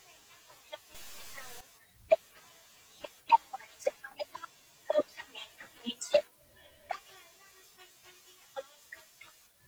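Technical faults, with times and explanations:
0.95 to 1.61 s, stuck bit: for about two thirds of a second the speech picks up a grainy noise riding on the waveform, and the gaps between sounds fill with a steady low hiss instead of going quiet. The likely cause is one data bit jammed at a fixed value, so roughly half the samples get knocked off by a small fixed step, somewhere around -45 dBFS, which is why even near-silence turns noisy.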